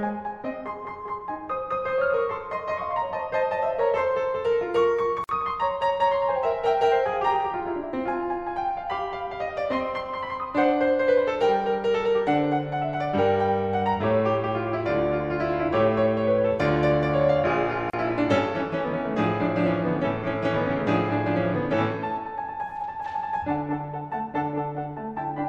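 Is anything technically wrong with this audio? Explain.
Yes. Gaps at joins of encoded pieces at 5.24 s (about 50 ms) and 17.90 s (about 33 ms): untrimmed encoder delay and padding leave brief silences with smeared edges before the music resumes.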